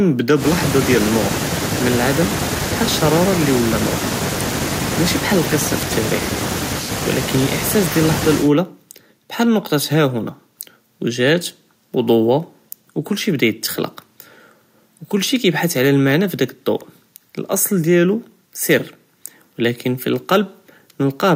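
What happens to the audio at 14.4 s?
Nothing goes wrong at 14.4 s; the speech there plays through intact, with no dropout, click or distortion.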